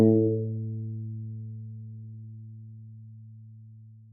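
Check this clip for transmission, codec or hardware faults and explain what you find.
Nothing in the transmission, codec or hardware chain gives itself away here; no fault is audible anywhere in the clip.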